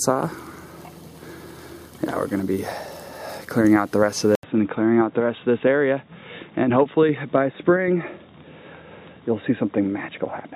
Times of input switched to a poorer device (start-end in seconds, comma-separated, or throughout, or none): 4.35-10.56